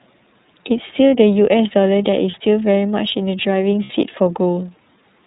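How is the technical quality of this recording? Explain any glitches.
The quality is limited. The whole recording is band-limited and coded, and it has two brief dropouts.

The iLBC codec shapes the entire clip. Nothing above 4 kHz survives, so the speech sounds muffled and telephone-like, with a plainly audible rough, slightly synthetic grain. iLBC is a narrowband VoIP codec that models each frame's excitation on its own rather than building on the previous frame. The long frame spacing fits iLBC's 30 ms mode at around 13.3 kbps, and that coarse per-frame modelling produces the roughness.

Lost iLBC frames cause the two glitches, at 2.31 to 2.35 s and at 3.84 to 3.91 s. Each sounds like a short held, faintly buzzy vowel. The first gap fits one 30 ms frame and the second is longer, about 60 ms. When packets go missing, the decoder fills the hole by repeating the last pitch cycle blended with noise. 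Because each frame decodes independently, the speech returns cleanly right after each gap.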